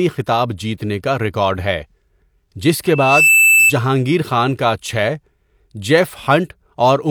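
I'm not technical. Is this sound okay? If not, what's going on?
No. From 2.86 to 3.73 s there is loudspeaker feedback squeal. The microphone picks up its own loudspeaker, and a piercing 2.6 kHz tone builds within about half a second to louder than the speech. It stops just before "خان کا چھ".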